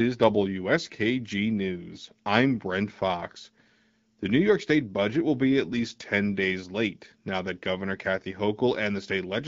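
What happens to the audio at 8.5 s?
At 8.5 s the speech is intact: it simply continues through the AMR wideband (HD Voice) codec at 12.65 kbit/s, with no fault at that moment.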